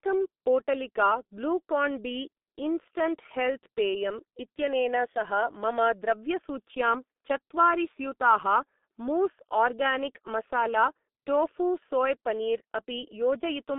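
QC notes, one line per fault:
Throughout: G.723.1 codec, heavy damage. The speech sounds muffled and hoarse, with smeared consonants, as the coder rebuilds the voice from a coarse model refreshed only every few tens of milliseconds. The thinness fits a rate around 6.3 kbit/s. A spectrogram shows energy confined to roughly 200 Hz to 3.6 kHz, a hard ceiling with nothing above 3.8 kHz, and blurred, blocky formant tracks. The waveform looks rounded, with soft onsets instead of crisp transients.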